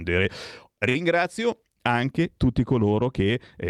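At 0.89 s a packet of this speech arrived late and the jitter buffer ran dry, causing a short stall from a late packet. The receiver stretched the last sound by 56 ms until 0.97 s, then resumed where it stopped, so nothing is lost but the sound briefly hangs with a faint buzz or dip.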